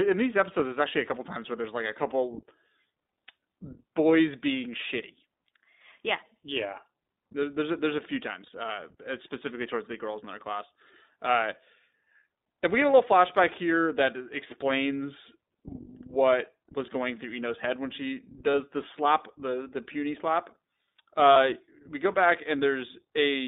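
Speech that sounds narrow and plainly rough and synthetic throughout, with nothing below 200 Hz or above 3.7 kHz. This is the iLBC codec: a narrowband VoIP coder that codes each 20 ms frame's excitation on its own, giving a telephone-band line and a coarse texture consistent with its 15.2 kbps mode. Three short dropouts stand out where the sound turns into a brief held, buzzy or breathy vowel. The first is at 8.46 to 8.49 s, between "a there's a few" and "uh specifically towards the". The second is at 18.50 to 18.55 s, between "head when she" and "the slap the the". The third is at 21.32 to 21.37 s, just before "we go back". These are lost iLBC frames. Each gap matches one or two missing 20 ms frames, about 20 ms for the first and 40 ms for the others. The decoder filled each gap by repeating the last pitch cycle mixed with noise. Because every frame stands alone, the speech recovers immediately after each gap.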